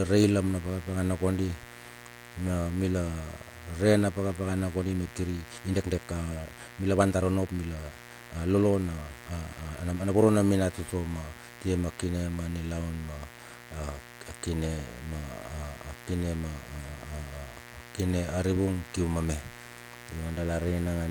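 A steady, raspy mains buzz runs under the speech for the whole clip. It sits about 20 dB below the speech. Its base is 60 Hz, but it is not a smooth hum. Sharp switching spikes, twice per mains cycle, leak into the signal. A dimmer, a rectifier or a missing shield can let them in. The spikes build harmonics that climb into the kilohertz range. That gives the buzz its grainy edge.

From 4.73 s to 10.27 s there is a time-stretched section. The pace jumps forward abruptly, to about 1.46 times normal speed. The pitch does not rise with it. The speech sounds rushed. This is likely software squeezing the audio to fit a set length. It keeps the pitch by dropping short slices. At 10.27 s the normal pace returns.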